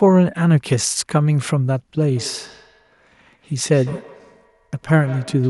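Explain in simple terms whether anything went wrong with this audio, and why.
Something did go wrong. From 2.17 s to the end of the clip, the speech has a feedback echo between two devices. Two devices in one room were likely on the same call. One played the other's sound out loud, and that microphone picked it up again. Each device's echo canceller only removes its own playback, so this loop got through. Every word comes back faintly, roughly 150 ms later, sounding thinner and more ringing.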